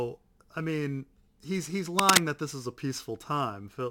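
From 1.99 to 2.18 s, right after "I mean he's he's" and just before "that this is a", a dense, uneven scratching and rustling sweeps across the speech, roughly 10 dB louder than the voice itself, for about a fifth of a second. This is cable scratch noise: the likely cause is a worn cable, plug or control being moved, so that its contact resistance jumps rapidly and injects ragged bursts of noise straight into the signal.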